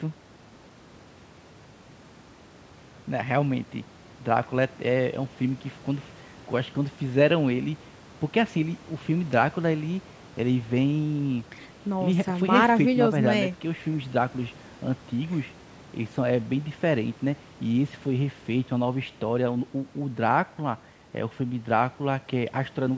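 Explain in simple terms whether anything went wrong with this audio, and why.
Nothing went wrong; this speech recording has no faults.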